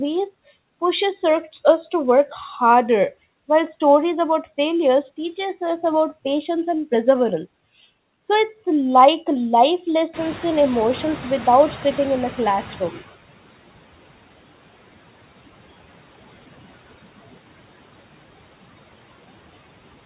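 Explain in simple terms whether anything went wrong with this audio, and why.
Two things went wrong, both caused by the noise suppressor on this speech.

Noise suppressor artifacts run through the whole clip. The suppressor keeps pushing the background noise down between phrases and lets it back up under them.

Noise suppressor catching up happens from 10.13 to 13.16 s. Around 10 s the room noise suddenly gets louder. The suppressor is still tuned to the quieter noise, so the louder noise comes through at first. It takes about 3 seconds to adjust and pull the noise back down.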